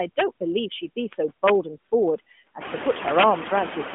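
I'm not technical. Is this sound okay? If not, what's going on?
No. Two things are wrong. A noise suppressor, meant to strip out steady background noise, is working throughout and being quite heavy-handed. It pushes the noise down in the gaps and lets it back under the speech.

There is also integer overflow: a loudness calculation ran past the biggest number the system can hold and wrapped around to the opposite extreme instead of stopping at the limit. Loud moments become sudden harsh cracks, a brief one at 0.19 s and longer stretches from 1.13 to 1.50 s and from 2.90 to 3.23 s. These are much sharper than ordinary distortion.

The background noise in the room gets noticeably louder from about 2.5 s, and the muffled, phone-like tone comes from the mobile phone connection. Neither of these is a fault.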